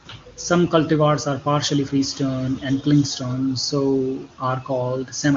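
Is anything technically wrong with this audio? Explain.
No, nothing is technically wrong with this speech.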